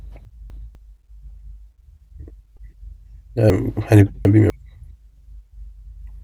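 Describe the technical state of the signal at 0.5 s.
At 0.5 s the speech is in a stretch of chunks out of order, running from 0.25 to 0.75 s. The audio moves in 250 ms chunks. One chunk arrived one chunk late, so it plays after the chunk that should follow it. Nothing is missing, but the two pieces are swapped. The sound jumbles briefly. There are hard joins at 0.25, 0.5 and 0.75 s.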